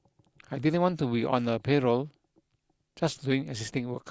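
No technical faults can be heard in this recording.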